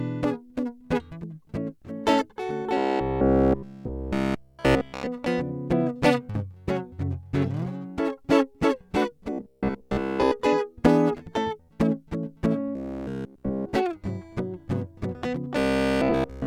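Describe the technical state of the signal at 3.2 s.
At 3.2 s the music has robotic sound from repeated short buffers (2.77 to 5.07 s), a rigid 66.7 Hz buzz throughout, likely from one 15 ms chunk looping, visible as identical repeating waveform cycles and evenly spaced spectrogram harmonics.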